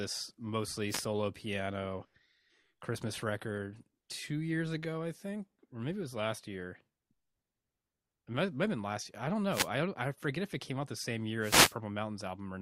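Three wireless microphone noise hits break into the speech, at 0.88 to 1.06 s, at 9.49 to 9.69 s (between "last year I don't" and "I don't I forget"), and at 11.39 to 11.76 s, just after "came out the same". Each time, the analogue FM radio link fades as reflected signals cancel, and receiver noise swells into a brief swish of static over the voice. A spectrogram shows broadband noise smeared across all frequencies for those spans. The waveform thickens into fuzz.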